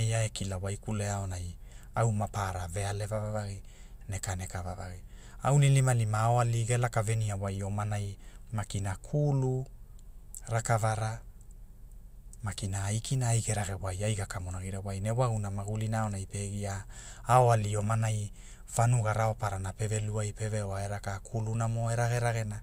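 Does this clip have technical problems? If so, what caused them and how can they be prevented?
No, this clip does not have technical problems, so there is nothing to trace or prevent.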